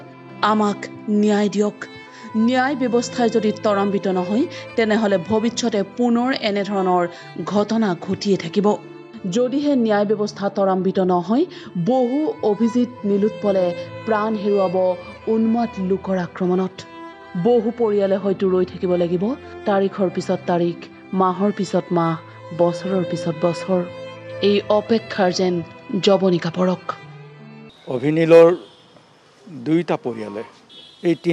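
Listening through the whole clip, nothing in the sound stood out as a technical problem.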